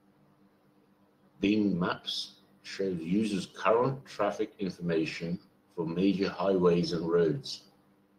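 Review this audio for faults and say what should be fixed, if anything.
At 3.09–3.15 s and 4.61–4.67 s, the speech briefly turns rougher and noisier for about 40 ms each time, which fits two lost packets per event. This is a lost packet rebuilt from error correction: the following packets carried low-bitrate copies that the decoder played, so nothing drops out. A spectrogram shows short smeared, grainier patches with no silent gap, and the waveform stays continuous. To prevent it, reduce packet loss on the network path, for example with a wired link or less congestion.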